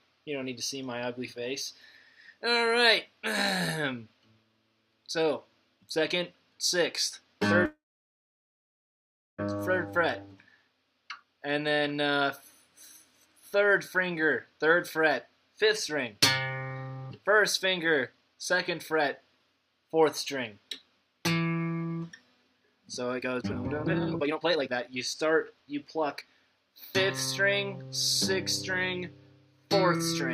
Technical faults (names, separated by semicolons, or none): call audio freeze; jitter buffer speed-up